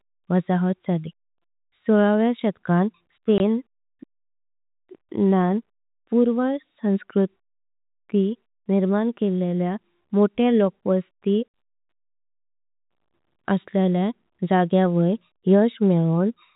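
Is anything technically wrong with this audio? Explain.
Yes. There is packet loss filled with silence, once at 3.38 to 3.40 s right after "सोलाव्या शतकां" and again at 11.50 to 11.54 s after "निर्माण केलील्या मोठे लोकवस्ती". Missing packets were replaced with silence, so the audio drops out abruptly. On a waveform these show as flat-line gaps, and on a spectrogram as blank vertical strips. The narrowband telephone coding is audible only as the missing content above 4 kHz.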